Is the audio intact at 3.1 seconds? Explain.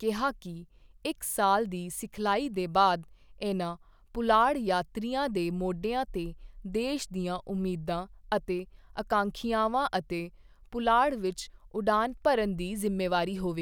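Yes, the audio is intact at 3.1 seconds, with no dropout, click, distortion or other fault at that moment.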